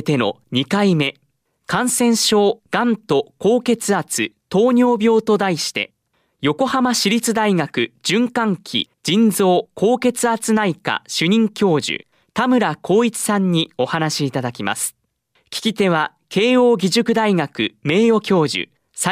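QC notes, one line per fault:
No faults found in the speech. Nothing here calls for a QC note.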